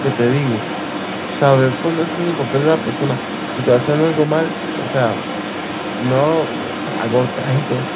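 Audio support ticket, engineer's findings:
Second voice audible under the talker from 0.0 s to 7.96 s, roughly 10 dB down. Other side's voice leaking through: far-end loudspeaker playback reaching the mic, likely residual left by an incomplete echo canceller. Band stops near 4 kHz, consistent with a G.711 mu-law path at 64 kbps, so both voices sound narrowband.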